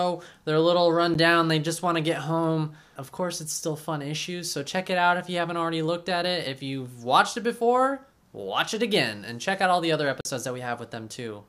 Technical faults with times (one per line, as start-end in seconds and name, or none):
1.14 block of digital silence
10.21-10.25 block of digital silence